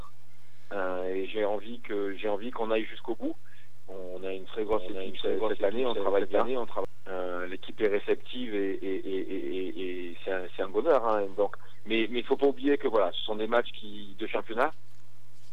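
A doubled audio track runs from 4.73 to 6.85 s. A second full-band copy of the sound, roughly as loud as the original, trails about 0.7 s behind with no decay or room colour, likely from a slower capture path, and it starts and stops abruptly.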